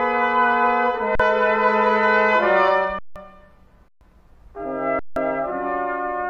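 The sound stalls four times with an underrun with held sample: at 1.15 s for 43 ms, then at 2.99, 3.88 and 4.99 s for 128 to 171 ms. The output freezes flat at a held level, and roughly 40 to 150 ms of live audio was skipped at each gap.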